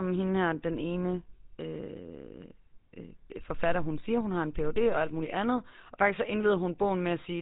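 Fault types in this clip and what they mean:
GSM full-rate codec: The speech has a plainly audible buzzy, gravelly roughness from start to finish, with a dull, boxed-in tone because nothing above 4 kHz gets through. This comes from an early mobile-phone speech coder that models the throat and mouth as a filter, then drives it with a sparse train of regularly spaced pulses instead of the real excitation, keeping only one sample in three. The result fits GSM full rate at about 13 kbps.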